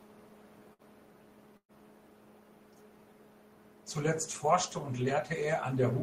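At 0.73 to 0.82 s and again at 1.57 to 1.72 s, the speech smears into a brief held, fading sound and then jumps ahead. This is burst of packet loss: about 60 ms and then 120 ms of audio never arrived, and the receiver stretched out the last sound, falling fully silent for part of the longer gap.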